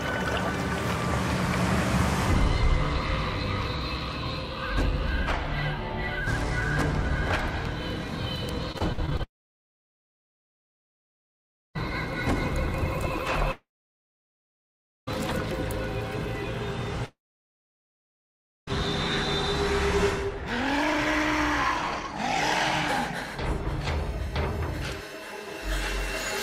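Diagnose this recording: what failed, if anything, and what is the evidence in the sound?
Between 8.72 and 11.79 s the network stage shows scattered short gaps: about seven brief ticks and smears where lost or late packets were patched by extending the preceding sound. The longest hole is about 50 ms, and together they cover roughly 5% of that stretch. On a waveform each appears as a short, slightly repetitive segment. A spectrogram shows thin vertical seams where the harmonic pattern briefly freezes and then resumes.

There are three long gaps where the sound stops, briefly trails off as a fading continuation, and then falls silent. The first runs from 9.23 to 11.77 s (2.52 s lost, about 2.46 s silent), the second from 13.51 to 15.09 s (1.56 s lost, 1.42 s silent), and the third from 17.06 to 18.69 s (1.62 s lost, 1.51 s silent). Each is likely a long network dropout. On a waveform they appear as flat stretches, and a spectrogram shows a short smeared tail followed by blank columns.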